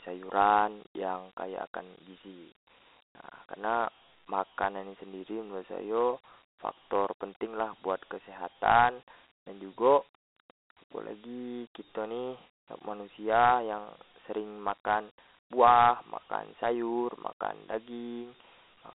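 Dialogic VOX ADPCM damage runs through the whole clip. The speech has been squeezed into 4-bit adaptive differential samples, which fits 32 kbit/s at 8,000 samples a second. Each sample stores only a coarse step from a predicted value, so the error rides on the signal as plainly audible gritty hiss that rises and falls with the speech. The line band spans roughly 250 Hz to 3.7 kHz, and nothing sounds above 3.9 kHz.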